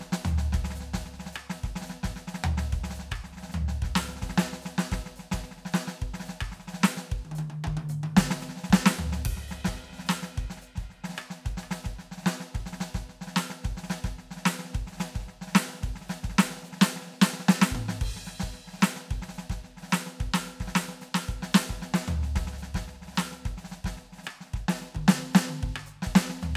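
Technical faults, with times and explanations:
No technical faults detected.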